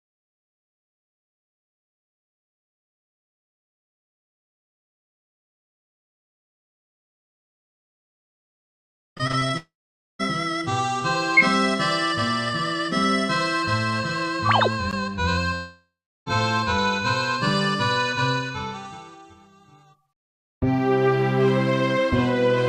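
The audio has network trouble in three places, all of it loss in transit. From 9.17 to 9.51 s there's repeated packet loss with that choppy, robotic quality: five short holes, the longest 20 ms, about 100 ms of sound missing in all. Each one gets patched by stretching the last bit of sound, so roughly 29% of that span is filled-in material rather than the real thing. Right after, from 9.57 to 10.21 s, the sound stops for about 620 ms, and around 500 ms of that is silence before it picks up again further along. The same thing happens from 15.55 to 16.28 s: about 720 ms is gone, with around 370 ms of silence. In both of those gaps the audio resumes without the lost stretch. A long network dropout is the likely cause of each, where nothing arrived and the receiver ran out of sound to extend.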